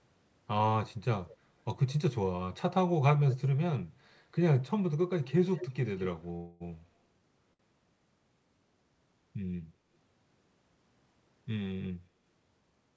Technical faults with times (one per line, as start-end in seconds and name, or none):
1.28-1.36 echo leak
5.23-6.08 echo leak
6.36-6.62 call audio freeze
7.53-7.61 short stall from a late packet